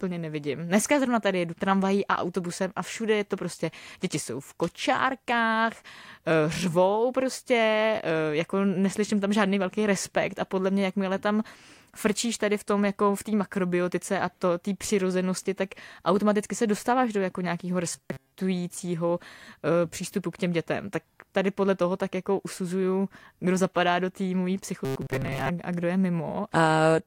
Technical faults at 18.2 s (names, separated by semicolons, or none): robotic sound from repeated short buffers